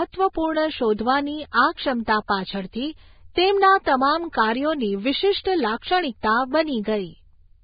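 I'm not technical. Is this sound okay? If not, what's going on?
No. From start to finish the speech sounds dull and muffled, as if heard through a wall, with a grainy hiss and a rough edge on the voice. Nothing above about 4.9 kHz comes through. This is likely Vorbis compression squeezed very hard: to save space, the codec drops the highest frequencies and stores the rest so coarsely that fine detail turns into hiss.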